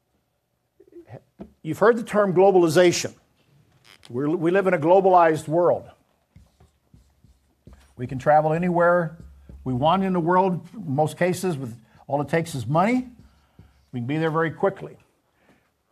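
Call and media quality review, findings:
No faults found in the reviewed audio. Nothing in the clip calls for follow-up.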